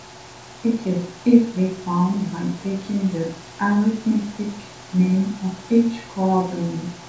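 Nothing goes wrong here at all: the speech comes through a G.722 call path with the top end stopping at 8 kHz, and the room's own background noise sits quietly about 26 dB below the speech.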